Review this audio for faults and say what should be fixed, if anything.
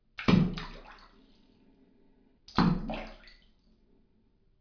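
Nothing to fix: no technical faults were heard anywhere in the sound.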